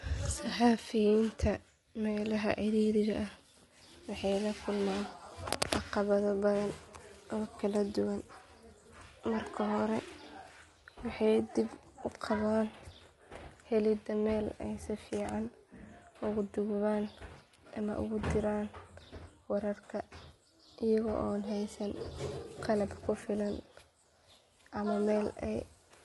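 Throughout the speech, the sound is rough and grainy, with noise between the harmonics and nothing above 11.6 kHz. The likely cause is low-delay AAC compression (AAC-ELD, fitting about 32 kbps), whose short frames blur pitch. A simple low-pass would cut the top but leave no such graininess below it.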